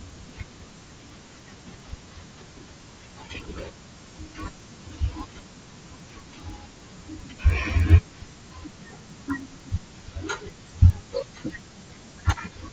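Throughout the speech, a steady ticking runs at 10 per second, riding on the signal and vanishing whenever the sound stops. This is a resampler restarted on every block: the conversion from 16 kHz to 48 kHz was done on each 100 ms block in isolation, so the filter at every block edge had no true neighbouring samples to work from. Each boundary picks up a small discontinuity, and those errors repeating every 100 ms form the tick pattern.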